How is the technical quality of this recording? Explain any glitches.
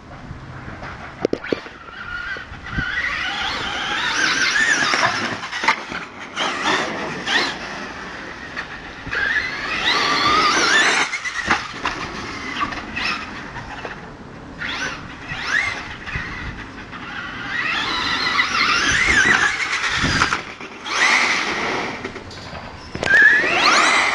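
The recording has one glitch, a doubled audio track from 19.64 s to the end. A second full-band copy trails the original by about a tenth of a second, a few dB quieter, with no decay or room colour. It starts abruptly, giving a hard slap-back. The likely cause is the signal being captured again through a slower path.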